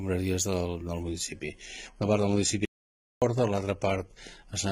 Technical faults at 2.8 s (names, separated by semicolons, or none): adaptive stream at a lower bitrate; audio dropout to silence